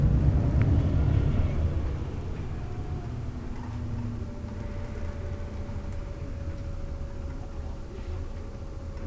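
No technical faults can be heard.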